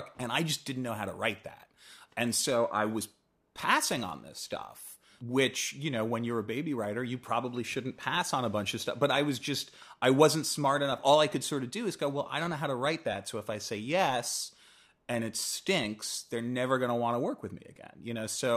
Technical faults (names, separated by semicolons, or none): channel delay (comb filtering)